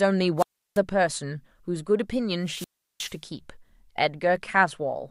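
At 0.37 s and again at 2.45 s the speech breaks up in a wireless microphone squelch dropout. Static swells as the FM radio link fades, then the receiver's squelch mutes for 338 ms and 362 ms, and speech returns at 0.79 s and 3.18 s. Unlike a digital packet dropout's abrupt clean gap, each hole here is preceded by rising hiss, the audible signature of a weakening analogue carrier.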